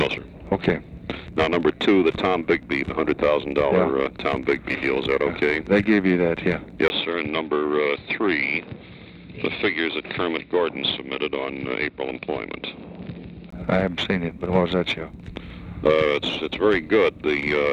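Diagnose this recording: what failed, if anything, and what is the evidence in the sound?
At 6.88 s there's a 20 ms gap, then everything above 5.1 kHz vanishes until 13.52 s, at the same level with a faint new noise floor. That's likely the input switched to a poorer device at the driver stage, running through a narrower-band microphone.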